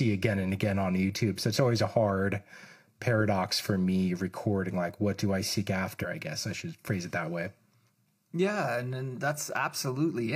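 A segment of the streamed speech likely failed to load and was skipped, so at 5.99 to 6.05 s the audio jumps abruptly from "what do I seek" to "I guess I should", with a small blip.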